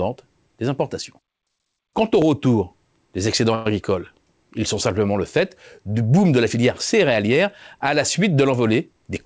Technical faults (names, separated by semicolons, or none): overlapping chunks; call audio freeze